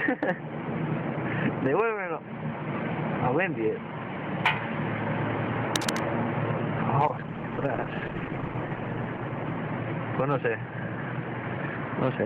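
From 5.76 to 6.00 s there is a burst of cable scratch noise, likely from a worn cable or connector being moved so its contact resistance jumped about. It sounds like a harsh rustle only a little below the sound itself. On a spectrogram it shows as ragged broadband smears, and on the waveform as dense spiky clutter.

From 7.09 to 10.87 s a call bitrate drop coarsens the audio. It turns rough and muffled, which points to the encoder falling from around 48 kbps to about 11 kbps, with the worst stretch lasting about 1.2 s. A spectrogram shows the upper frequencies cut away and the remaining detail blotchy until it recovers.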